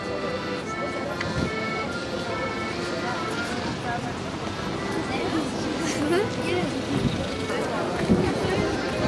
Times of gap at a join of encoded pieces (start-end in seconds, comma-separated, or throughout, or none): none